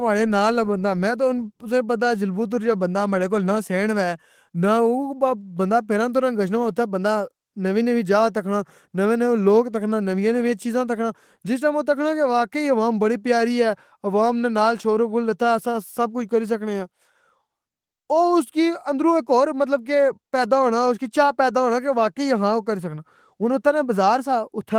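No technical faults can be heard; the speech runs through Opus voice compression at 20 kbps in hybrid mode with full bandwidth, so its content extends to about 20.2 kHz with only light coding damage.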